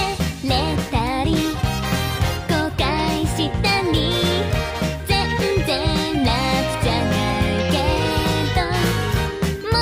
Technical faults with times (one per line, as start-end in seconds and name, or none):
none